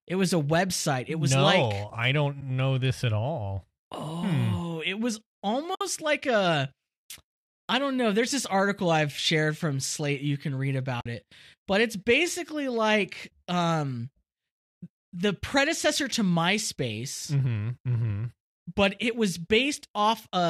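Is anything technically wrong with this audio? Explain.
Yes. There is AAC frame loss with muting at 2.41 s, from 5.75 to 5.81 s, and from 11.01 to 11.06 s. Compressed audio frames went missing and the decoder zeroed them, so the overlapping windows fade the speech out and back in. This leaves soft-edged gaps of roughly 10, 60 and 50 ms. The coding underneath sounds only slightly rough, likely from low-delay AAC.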